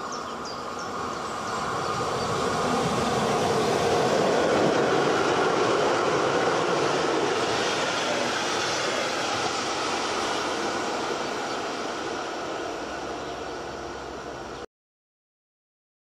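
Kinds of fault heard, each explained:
Cut-off end: the sound stops dead at 14.65 s, right in the middle of whatever's playing, and drops straight to digital silence with no decay at all. That's the last stretch of buffers never getting written out, leaving about 1.5 s of nothing afterwards.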